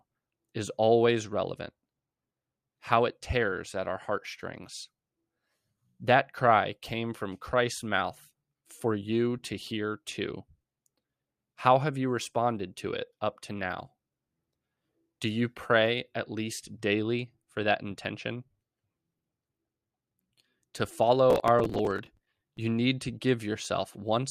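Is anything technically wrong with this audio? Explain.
Yes. From 21.30 to 22.58 s there's processor overload crackle: the system couldn't fill its buffers, roughly 10 ms each, in time, and missed a few dozen of them over that stretch, replaying stale audio each time. The hard edges pile up into gritty tearing over the speech.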